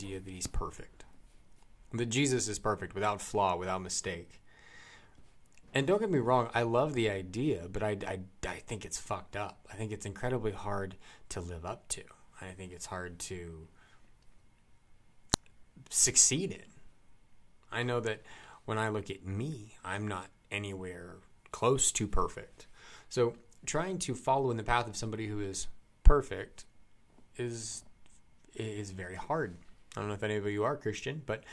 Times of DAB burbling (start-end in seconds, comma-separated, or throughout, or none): none